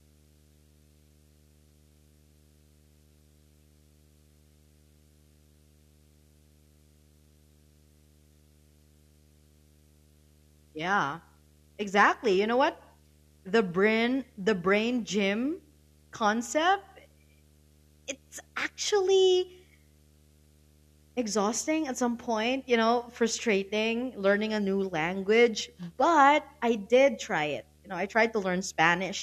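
Throughout the speech runs a video or display buzz: a screen or video cable couples into the audio, adding a 75 Hz field-rate buzz with hash above, roughly 35 dB down. A spectrogram shows steady lines at 75 Hz and its harmonics, visible between phrases.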